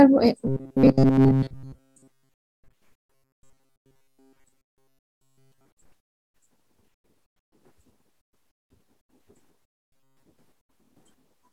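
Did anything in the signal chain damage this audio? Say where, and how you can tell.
Yes: robotic sound from repeated short buffers at 0.47–2.75 s, 3.00–5.67 s and 9.89–10.23 s, a rigid 134 Hz buzz. The buffer stage likely kept replaying a 7.5 ms block. Its fixed rate, unlike codec smearing that tracks the content, gives it away.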